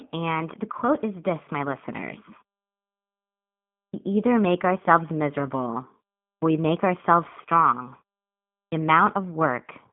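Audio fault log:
Throughout: G.729 codec. The speech is confined to a telephone band of roughly 150 Hz to 3.4 kHz, with nothing above 3.5 kHz. The damage is plainly audible as a rough, synthetic texture. It fits an 8 kbit/s G.729A stream rebuilding speech from a vocal tract model and sparse pulses.
3.84, 6.33 and 8.64 s: clipped start after a pause. Speech resumes abruptly, missing its opening sounds. About 95, 91 and 80 ms are lost after pauses of 1.49, 0.38 and 0.69 s. The output device sleeps during silence and wakes late.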